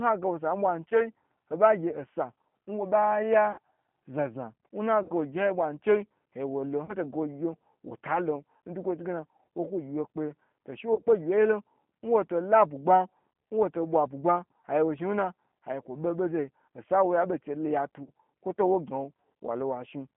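Throughout, the speech passes through a G.729 codec at 8 kbit/s. Its pulse-based rebuild sounds rough and synthetic, with nothing above 3.4 kHz. VoIP packet loss concealed by the speech codec strikes at 0.89, 3.52, 5.03, 6.85, 10.94, 13.32 and 18.03 s. Each 20 to 60 ms gap is filled with a fading, buzzy or noisy extrapolation of the last sound.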